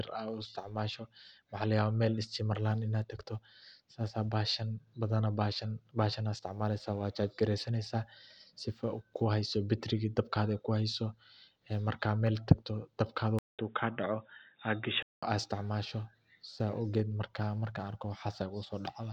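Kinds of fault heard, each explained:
Input switched to a poorer device: At 13.39 s the speech drops out for about 200 ms, then comes back dull and boxy, with nothing above 3.8 kHz, a few dB quieter, and sitting on a faint new background noise well below the voice. It stays like that until 15.23 s. That sudden narrowing, with its own tone and noise, is most likely the recording input jumping to a lesser microphone or a headset's call mode.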